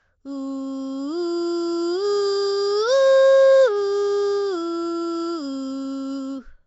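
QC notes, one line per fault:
Throughout: Nellymoser compression, the music carrying a rough, hissy halo and a smeared, underwater quality, likely from the Flash-era Nellymoser Asao codec. It spends a fixed bit budget on short blocks, leaving weak bands empty and filled with noise. Nothing remains above 7.7 kHz, which points to a bitrate near 32 kbps.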